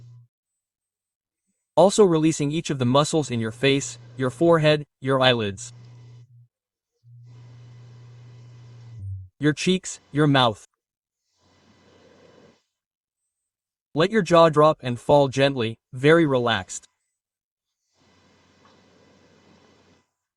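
At 8.99 to 9.01 s the audio skips ahead: roughly 0.4 s is missing, joined almost directly with no gap, because a stretch was dropped, in transit or by the jitter buffer on overflow, while later audio was already waiting. A waveform or spectrogram shows an abrupt seam where the two sides of the jump abut. From 10.15 to 10.68 s a jitter buffer speed-up runs the sound about 8% fast at unchanged pitch as the receiver trims repeated pitch-period slices, roughly 50 ms in total, to shrink excess delay. On a spectrogram, harmonics stay level while events crowd slightly closer together in time.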